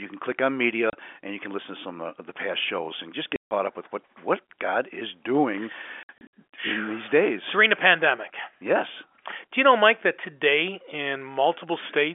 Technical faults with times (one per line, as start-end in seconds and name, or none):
0.90-0.93 packet loss filled with silence
3.36-3.51 packet loss filled with silence
6.03-6.29 packet loss filled with silence